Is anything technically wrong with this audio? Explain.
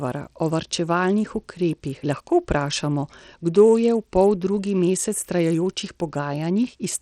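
Yes, there's a problem running through the whole clip. The speech carries gritty, grainy noise riding on it, with the top end sounding unstable and nothing at all above about 18.4 kHz. That pattern points to likely Bluetooth SBC compression at a starved bit pool, something around 80 kbps. SBC splits the signal into a few wide bands and hands out bits crudely, so the upper bands get shortchanged and everything is coarsely quantised, leaving that rough, aliased edge.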